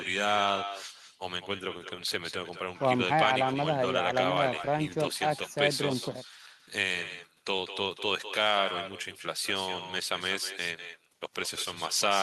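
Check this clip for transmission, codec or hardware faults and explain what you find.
One fault runs through the whole speech clip: echo with no canceller. The far end's loudspeaker feeds its microphone and nothing subtracts it, so every phrase returns about a fifth of a second later, about 10 dB down and thinner. Unlike room reverberation, it is a distinct, delayed repeat rather than a smooth tail.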